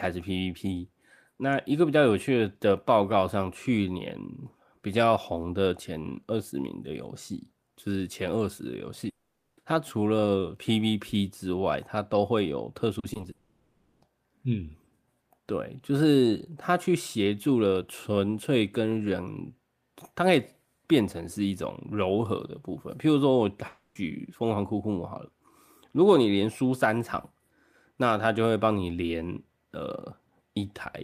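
A speech clip with two related faults. From 9.09 to 9.59 s, 13.31 to 14.03 s and 23.67 to 23.97 s the sound stops and is replaced by a fading buzz. In the first gap this falls to near silence for about 0.43 s. These are likely a long network dropout, with roughly 0.28 to 0.7 s of audio lost outright. Just before the second of these, from 12.99 to 13.25 s, repeated packet loss gives a choppy sound with pieces missing. Here four short holes, none longer than 40 ms, are patched, and together they cover about 38% of that stretch. What separates the two is the pattern of the gaps: a dropout is one continuous break, while packet loss is a rapid series of tiny ones.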